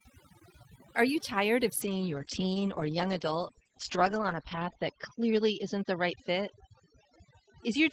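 From the start, overdone noise removal leaves near-silent gaps dotted with twinkling specks. Single frequency bands near the noise estimate are cut hard, and quiet speech detail goes with them. The damage follows the noise floor, not any change in the signal's bandwidth.

At 1.85 s, just after "you tired of", a call bitrate drop from 32 to 9 kbps narrows the bandwidth from 20 kHz to 8 kHz. The speech turns muffled and rough, sits at its lowest for 2.63 s, and doesn't recover. The abrupt loss of top end at one moment sets it apart from the steady noise-removal artefacts.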